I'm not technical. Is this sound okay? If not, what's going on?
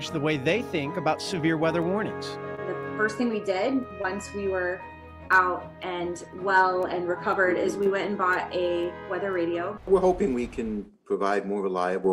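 No. There is short concealed packet loss at 2.55–2.59, 4.02–4.06, 5.28–5.32 and 7.84–7.89 s. Each time, about 20 ms of audio arrived too late, and the receiver patched the gap by extending the preceding sound. You hear this as brief smears or wobbles.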